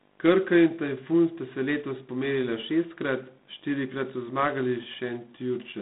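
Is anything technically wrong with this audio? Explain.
Yes. G.726 ADPCM coding runs throughout: each sample is sent as a few bits of error from an adaptive prediction, and the harsh, rasping hiss tracking the speech level fits 24 kbit/s. The band spans 150 Hz to 3.7 kHz, with nothing above 3.9 kHz.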